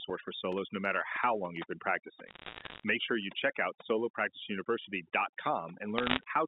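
A noise reduction stage has been set far too aggressively for the whole of this speech clip. This is overdone noise removal: the processor treats any frequency band sitting near its noise estimate as unwanted and drives it almost to zero, catching the softer parts of the voice along with the hiss. The background collapses into near silence dotted with twinkling, chirpy specks.

From 2.27 to 2.84 s, right after "how long you've been", and again from 5.98 to 6.24 s, there are bit errors on a digital phone line. At a rate of somewhat under one percent, stray flipped bits corrupt individual samples on the G.711 mu-law link. Wherever a high-order bit, or the sign bit of a loud sample, is hit, that sample jumps sharply, so each burst is a crackle of sharp ticks laid over the speech. Apart from these bursts, the line's narrow 200 Hz to 3.7 kHz telephone band is audible throughout.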